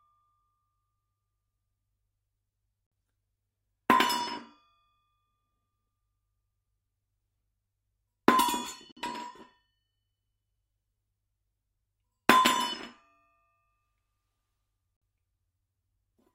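Gap between chunks at 2.87, 8.92 and 14.97 s: the sound arrived in 6-second chunks, and each join leaves a 50 ms silent hole with hard edges. Nothing is lost; playback simply stops briefly and restarts at each regular chunk boundary.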